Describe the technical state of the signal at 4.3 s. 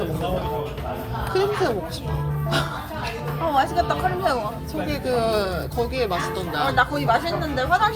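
At 4.3 s the signal is intact, with no fault present at that moment.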